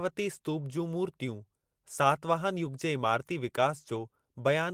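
A short recording of speech, with no technical fault to be heard anywhere in it. Nothing in the signal calls for a fix.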